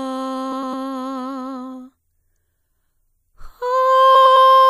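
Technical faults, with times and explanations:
0.52–0.74 s and 4.15–4.36 s, frames out of order: in each spot two neighbouring blocks of music, each about 105 ms long, play in swapped order. You get a brief garbled flutter, but no time goes missing.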